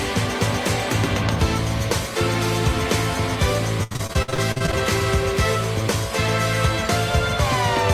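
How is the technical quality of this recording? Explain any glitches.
The recording has one clear glitch: a burst of repeated packet loss (robotic sound) from 3.83 to 4.74 s. Across that stretch, about a dozen short holes open in the stream, the longest about 72 ms. Each is patched by extending the last received sound, so roughly 38% of the span is synthetic fill. The audio turns choppy, with fragments missing, until it clears at 4.74 s.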